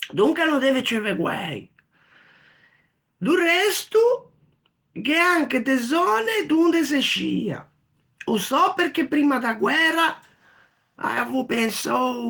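No technical faults are audible at any point in the speech recording.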